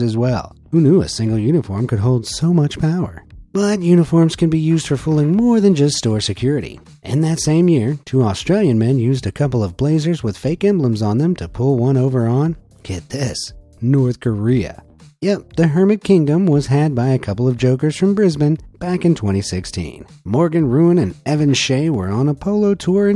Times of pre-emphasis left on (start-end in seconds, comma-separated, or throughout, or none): none